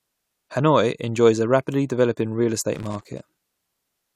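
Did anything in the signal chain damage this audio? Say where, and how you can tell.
Yes. The analogue wiring stage shows loose connector crackle from 2.74 to 3.59 s, just after "a rapidly developing real". An irregular burst of scratching breaks over the speech. A worn contact was making and breaking as it moved. It chopped the signal.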